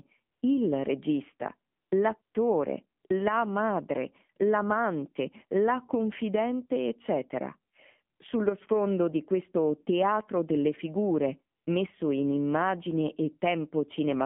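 Throughout, the speech passed through an AMR narrowband mobile codec at a low bit rate, plausibly its 7.4 kbps mode. The band is confined to 150 Hz–3.4 kHz and the voice sounds plainly buzzy and synthetic.

Where the phone judged the talker silent and stopped sending speech frames, AMR comfort noise filled the gaps with smooth synthetic hiss that switches in and out. This happens at 0.32–0.42 s, 1.72–1.92 s, 2.22–2.34 s, 3.00–3.04 s, 3.08–3.10 s, 8.16–8.20 s and 11.56–11.66 s, lasting 20 to 200 ms each.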